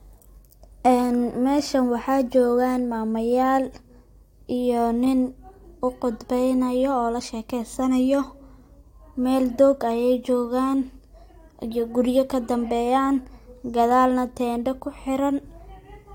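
Speech recording with no audible technical faults anywhere in the clip.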